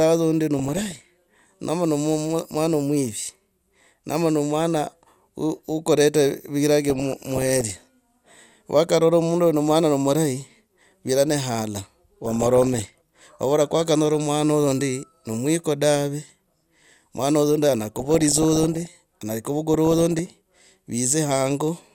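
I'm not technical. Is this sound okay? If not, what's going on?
No. DAB burbling occurs at 0.56–1.39 s (right after "uno ndi"), 6.85–7.83 s, 12.25–13.25 s, 16.21–16.93 s, 17.87–18.87 s and 19.74–20.19 s. Weak digital-radio reception let errors slip past correction, so slices of the sound briefly jump in level, giving short blips of noise over the speech.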